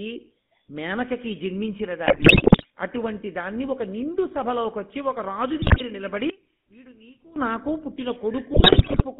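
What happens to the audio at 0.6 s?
At 0.6 s, as throughout, the speech passes through a GSM full-rate codec, which fits a 13 kbps stream. Its sparse pulse excitation leaves a gravelly buzz within a 200 Hz to 3.6 kHz band.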